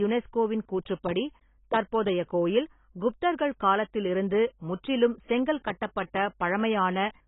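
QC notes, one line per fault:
throughout, AAC compression: the speech was likely encoded with AAC-LC at a very low rate, consistent with about 16 kbps. The encoder discards everything above 3.8 kHz and coarsely quantises what remains, so the speech sounds dull, smeared and heavily damaged.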